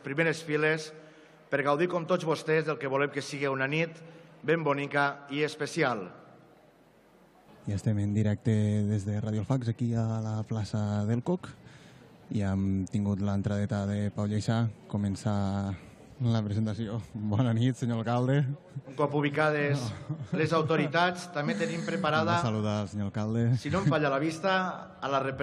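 No technical faults are audible.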